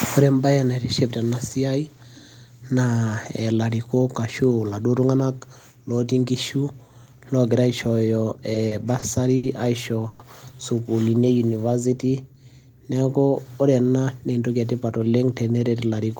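From 8.53 to 9.45 s, repeated stalls (stutter): the jitter buffer ran dry four times, and the receiver stretched held sound over 140 ms with nothing lost. Unlike one freeze, it drags in several short catches, the longest 70 ms.

From 10.07 to 10.21 s comes a single 120 ms hold of the last sound, with no silence. It is a call audio freeze, likely from packets being held up until the buffer emptied, leaving the delay 120 ms longer.

From 11.04 to 11.91 s, a jitter buffer slow-down repeats pitch periods to add 94 ms. Speech runs at 90% speed at unchanged pitch, smoothly drawn out rather than catching.

Just after "neeku ore", from 13.89 to 15.50 s, a jitter buffer speed-up trims about 150 ms of pitch periods. Speech runs at 109% speed, hurried but at the same pitch, with no gaps.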